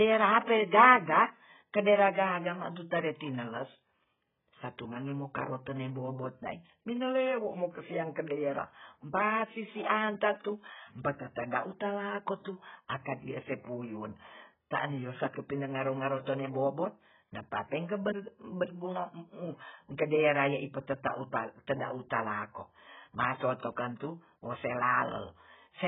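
Speech runs band-limited throughout, with nothing above 3.8 kHz, sounding dull and smeared with fizzy sibilants: likely heavy AAC compression, consistent with an AAC-LC stream around 8 kbps.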